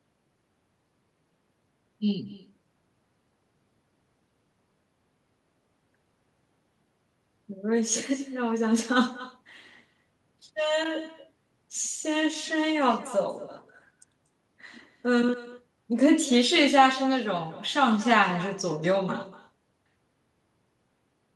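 The far end is playing this call through a loudspeaker, and its microphone is picking that playback up and sending it straight back with nothing cancelling it. This echo with no canceller runs through the whole recording: every phrase returns roughly a fifth of a second later, about 18 dB below the direct speech. The returning copy is quieter and thinner, trailing each utterance like a faint shadow.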